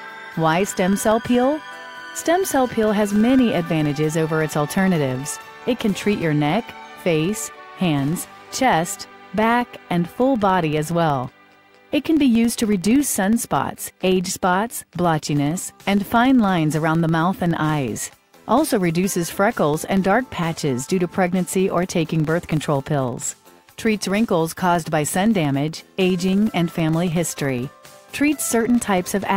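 From start to end, a filter restarted on every block produces a steady tick train at about 21.5 Hz, which fits a 2048-sample block. Each block opens from zeroed state with a small transient. Unlike mains hum, this buzz rises and falls with the signal's level.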